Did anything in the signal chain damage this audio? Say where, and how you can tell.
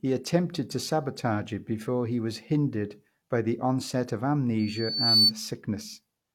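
Yes. The converter's sample clock is unstable, with timing jitter of around a microsecond throughout. Samples land slightly early or late, so steep, bright parts of the speech pick up a rough hiss some 35 dB below the signal, which rises on loud passages and disappears in pauses.

At the playback stage, a microphone is picking up the loudspeaker it feeds, producing a loudspeaker feedback squeal. Just after "by the onset of", a 4.5 kHz tone appears at 4.59 s, swells over about half a second to roughly 10 dB above the speech, and stops at 5.32 s.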